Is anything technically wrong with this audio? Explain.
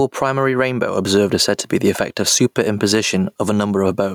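Yes. Gain pumping runs throughout: the gain is pulled down by about 15 dB under each loud syllable, likely from excessive input gain feeding a fast limiter. Unlike a noise gate, the level rides up and down rather than cutting off.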